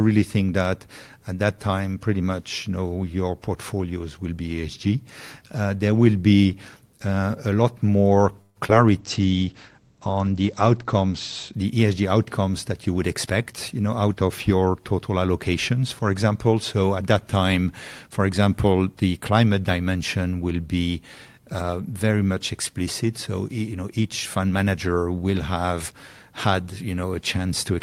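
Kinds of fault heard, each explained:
Call audio freeze: Packets most likely stalled in transit and left the jitter buffer empty, so the receiver stretched the last sound as a fading fill. From 8.41 to 8.57 s there is a held smear lasting about 141 ms, ending in about 20 ms of silence, before the sound resumes exactly where it stopped. Nothing is lost. The rest of the call is simply pushed about 141 ms later.
Short concealed packet loss: Two consecutive pieces of the stream failed to reach the decoder, each 20 ms, right after "uh a lot more". At 8.67 s the receiver covered the first gap with about 10 ms of continued sound and then blended back in. The second gap, at 8.71 s, got no fill at all and was just dropped. The result is a quick smear and a jump at 8.67 to 8.73 s.
Jitter buffer speed-up: Audio had built up in the jitter buffer beyond its target, so the receiver trimmed small pitch-period slices over and over to bring the delay back down. 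Between 12.72 and 14.62 s, just before "total allocations for example", the sound runs about 7% fast while keeping its pitch, and roughly 150 ms is removed. The delivery there sounds slightly rushed.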